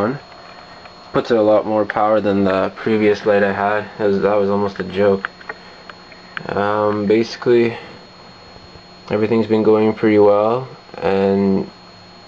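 No technical fault can be heard anywhere in this audio. There is nothing to point to by time and no cause to explain.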